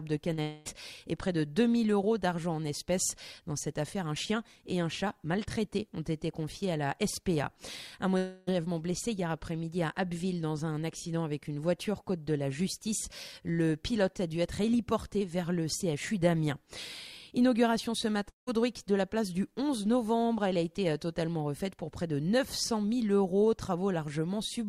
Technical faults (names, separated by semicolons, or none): short concealed packet loss; long network dropout